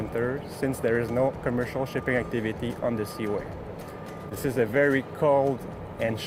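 At 4.29 to 4.33 s there is short concealed packet loss. About 20 ms of audio arrived too late for the decoder. The receiver invented 15 ms to bridge the gap by extending the preceding sound, then crossfaded back into the real signal. It is heard as a brief smear or wobble. The same fault returns at 6.05 to 6.09 s. There, 20 ms went missing and 20 ms was filled, with a similar short blur.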